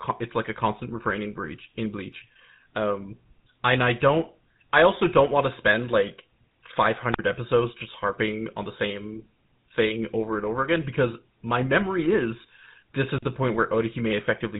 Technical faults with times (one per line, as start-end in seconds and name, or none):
0.00-14.59 GSM full-rate codec
7.12-7.19 wireless microphone squelch dropout
13.14-13.24 wireless microphone squelch dropout